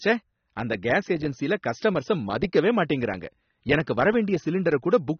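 The encoder was likely running AAC compression at a starved bitrate, consistent with AAC-LC at roughly 27 kbps, and it holds through the whole speech clip. Short of bits, it discards everything above about 6.3 kHz and quantises the remaining bands coarsely. The damage is plainly audible from start to finish: the speech sounds dull and muffled, sibilants lose their crisp edge and turn smeared and fizzy, and sustained sounds carry a warbling texture.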